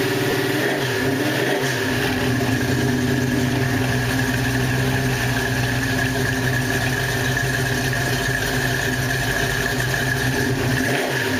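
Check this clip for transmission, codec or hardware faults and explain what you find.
One transmission fault: lost LE Audio frames at 0.31–0.33 s, about 20 ms, consistent with two 10 ms LC3 frames. Concealment repeats the previous spectrum with randomised signs, so the sound briefly turns into a noisy smear.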